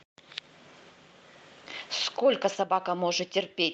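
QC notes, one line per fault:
Nothing stood out on listening; the speech comes through the Opus call path at the narrower bandwidth expected of that link.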